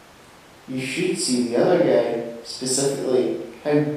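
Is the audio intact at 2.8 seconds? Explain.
Yes, the speech at 2.8 s is intact, with no dropout, click, distortion or other fault at that moment.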